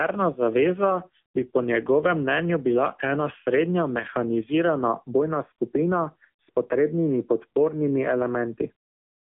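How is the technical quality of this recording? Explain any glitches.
The technical quality is poor. Throughout, the speech carries AMR narrowband mobile codec damage: nothing above about 3.4 kHz or below 200 Hz, with buzzy, synthetic vocal-tract modelling that points to a low mode near 7.4 kbps, unlike simple band-limiting.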